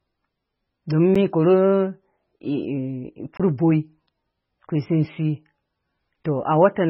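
From start to finish the speech sounds watery and swirly, with sibilants turning into metallic chirps, consonant attacks smeared, and nothing above 5.6 kHz. The cause is likely heavy MP3 compression at a very low bitrate, around 16 kbps. Starved of bits, the encoder chopped off the treble at a fixed point and zeroed out weak frequency lines, which then flicker in and out between frames and leave that unstable, underwater texture.

At 1.15 s a sharp tick cuts through. This is a block of digital silence lasting about 8 ms. The signal drops straight to silence and returns without any fade. At 3.37 to 3.40 s a second block of digital silence runs for about 23 ms, long enough to be heard as a brief hole. That length fits a 1024-sample buffer that the program failed to fill in time.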